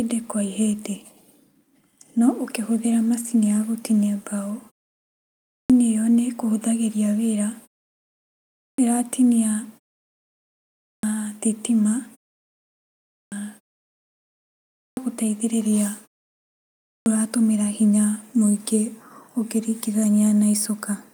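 The output device sleeps in each pause of roughly a second and takes about 0.3 s to wake, so speech returns missing its opening sounds. This clipped start after a pause occurs at 5.41, 8.45, 10.73, 12.99, 14.66 and 16.73 s, with each word bursting abruptly from silence.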